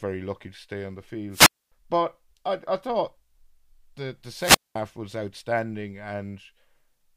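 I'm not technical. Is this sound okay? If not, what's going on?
No. There are two wireless microphone squelch dropouts. The radio link fades, you hear a quick burst of hiss, then the receiver mutes everything: about a quarter second of silence after "to stay on the" at 1.31–1.72 s, and about a fifth of a second between "the the" and "was outstanding" at 4.36–4.76 s.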